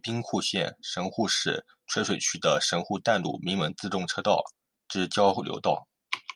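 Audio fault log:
2.55 s, electrical switching spike: one sharp, fairly quiet snap between "市垂水区" and "神户淡路". A nearby switch likely arced into the audio line.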